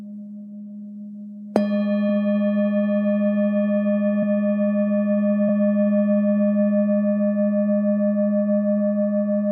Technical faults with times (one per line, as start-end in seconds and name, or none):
4.22 compressed frames skipped
5.48 compressed frames skipped